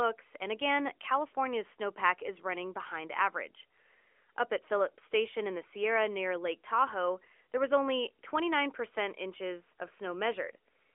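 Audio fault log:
Nothing stood out on listening to this speech.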